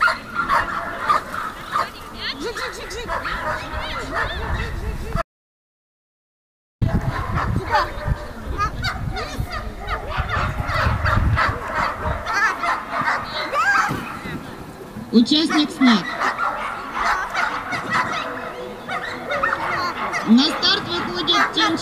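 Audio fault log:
5.22–6.81 s, audio dropout to silence: the sound cuts off abruptly and the next 1.6 s or so is dead silence, with no room tone or hiss, before it snaps back mid-flow. That total blankness suggests the input itself vanished while recording carried on, most likely a brief disconnect, a dropped link or an accidental mute, so whatever happened in that stretch simply isn't there to recover.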